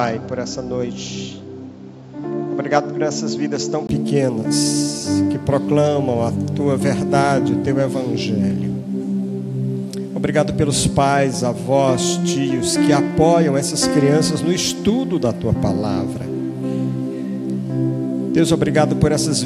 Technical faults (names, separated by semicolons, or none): input switched to a poorer device